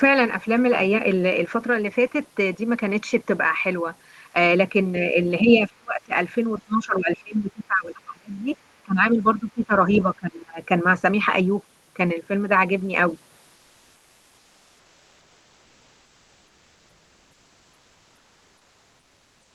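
A speech clip with two kinds of fault. The speech is suppressed in double talk at 5.41 to 6.13 s, 6.65 to 8.47 s, 8.84 to 9.71 s and 10.04 to 10.59 s. The level dips sharply, by around 35 dB in the first span and around 20 dB later. An echo canceller likely mistook the talk for echo. From 13.55 s to the end, comfort noise replaces the background. About six seconds of real room sound become a smoother synthetic noise, about 1 dB quieter. This likely comes from discontinuous transmission, fitting Opus DTX, and the band limit near 12 kHz also fits an Opus call path.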